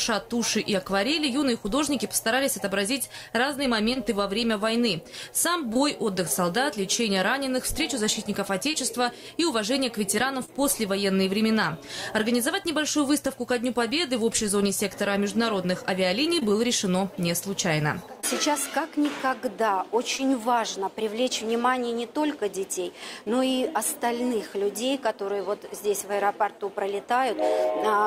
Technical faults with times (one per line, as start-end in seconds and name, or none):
3.93-3.97 short concealed packet loss
5.73-5.77 short concealed packet loss
8.71-8.75 short concealed packet loss
10.45-10.50 short concealed packet loss
16.40-16.43 short concealed packet loss
18.21-18.25 short concealed packet loss
20.17-20.21 short concealed packet loss